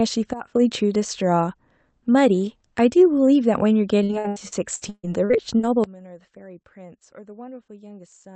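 At 0.33 s a sudden gain jump occurs, likely a gain setting applied without a ramp. The level drops about 15 dB from one sample to the next, so the speech and its background noise fall together with no fade, staying low until 0.55 s.

From 4.03 to 5.65 s, repeated packet loss breaks up the call stream with ten gaps, the longest 140 ms. Roughly a third of the stretch is patched by stretching the last sound, while 540 ms is simply missing. The speech turns choppy and robotic.

At 5.84 s a second sudden gain jump follows, likely another unramped gain step. It cuts the level by about 21 dB through to the end, with speech and noise sinking as one.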